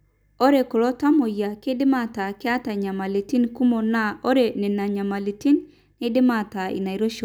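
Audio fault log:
No faults detected in the speech recording.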